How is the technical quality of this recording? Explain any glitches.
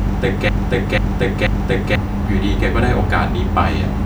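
The recording has one clear fault: a broken-record loop that fills the opening 1.95 s. The player or stream likely stalled and kept resending the last fragment it held. A 0.49 s slice of speech therefore repeats exactly, back to back, three times, already looping when the clip begins. The speech that belonged in that stretch is lost.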